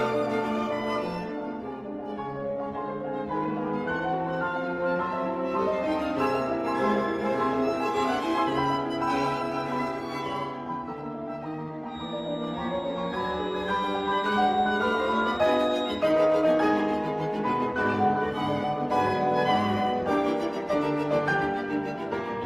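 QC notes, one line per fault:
0.70–3.23 s, call bitrate drop: the sound turns coarse and watery for about 2.5 s. This fits the Opus encoder being pushed from roughly 32 to 17 kbps after the bandwidth estimate fell, so coding noise rises and fine detail is lost.
11.86–16.08 s, feedback whistle: a thin, steady 3.8 kHz tone sits around 15 dB under the main signal and swells and fades slowly in level. This is likely a loudspeaker-to-microphone loop held just at the edge of feedback, ringing at one frequency without building up.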